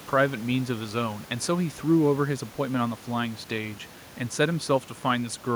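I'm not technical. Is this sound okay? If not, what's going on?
Yes, this one's fine: nothing is going wrong with the recording, and the faint background noise you might notice under the speech is just the natural sound of the room the microphone was in.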